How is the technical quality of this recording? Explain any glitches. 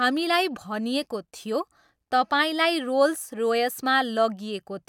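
No glitches turn up anywhere in this recording, and the signal comes through technically intact, with no dropouts, clicks, distortion or other faults to explain.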